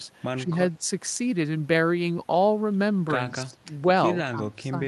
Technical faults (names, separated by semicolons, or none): speech suppressed in double talk